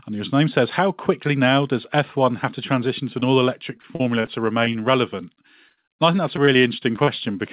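At 3.2 s there's a short concealed packet loss, about 20 ms that never arrived in time and were patched by stretching the previous sound, so you hear a quick smear. From 3.77 to 4.29 s comes repeated packet loss with a robotic sound: five gaps, the longest near 40 ms, each patched by the decoder, giving a choppy stretch with bits missing. More short concealed losses show up as small wobbles at 4.65, 4.72 and 5.68 s, then a longer one of about 40 ms from 5.72 to 5.79 s. The robotic choppiness returns from 6.17 to 7.09 s, with seven gaps this time, again none much over 40 ms. The whole call is band-limited to nothing above 4 kHz, which fits the G.711 mu-law path at 64 kbps.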